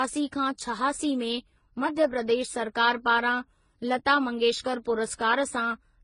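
Speech running through the whole clip with transcoding between lossy codecs, likely a low-rate HE-AAC pass followed by AAC and then Vorbis. Nothing sounds above 10.5 kHz, and unlike a single low-bitrate encode, several distinct artefact textures are stacked together rather than one consistent smearing.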